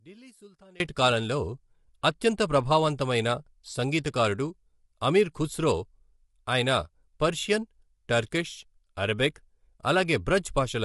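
For the first 0.8 s, the opening speech drops to a faint residue, about 26 dB down. This points to one channel inverted: with one stereo channel likely reversed in polarity, the centred voice cancels when the channels sum to mono, leaving only their small differences.

Throughout the clip the voice sounds rough and grainy, with noise filling the gaps between harmonics and nothing above 11.6 kHz. This is plainly audible low-delay AAC compression, likely AAC-ELD at a rate that fits about 32 kbps, whose short frames resolve pitch harmonics poorly.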